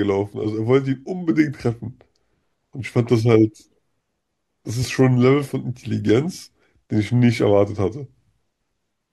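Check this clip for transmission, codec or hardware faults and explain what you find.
One fault is present in the speech: a single click at 6.10 s, consistent with dropped samples. A handful of samples, a fraction of a millisecond, are likely missing, so the waveform steps abruptly to a later value. Too brief to remove audible sound, the jump produces one sharp tick.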